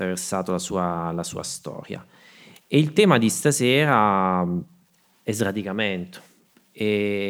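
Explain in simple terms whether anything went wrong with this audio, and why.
Nothing stood out on listening to this speech recording, so there is no problem to point to.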